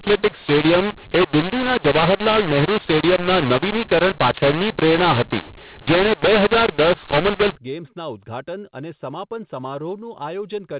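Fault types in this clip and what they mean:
mu-law and A-law mixed up: A-law telephone samples decoded as mu-law scramble the level mapping. Until about 7.56 s, just before "ગેમ્સના ઉદઘાટન", speech is harsh and gritty, and pauses fill with hiss. Unlike clipping, quiet moments are distorted too, not only peaks.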